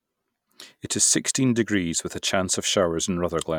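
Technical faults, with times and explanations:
No technical faults are audible anywhere in the speech recording, and the signal stays continuous and intact throughout.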